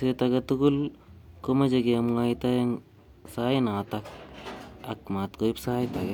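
No technical faults are audible anywhere in the speech recording.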